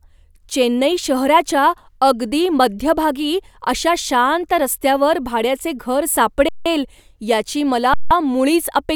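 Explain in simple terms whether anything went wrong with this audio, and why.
The speech briefly freezes twice, at 6.49 s and 7.94 s, for about 0.17 s each. This is an underrun with held sample: the player ran out of audio and held its last value, so the waveform goes flat and the sound stops, with almost no click. Nothing is skipped; the speech picks up where it stopped.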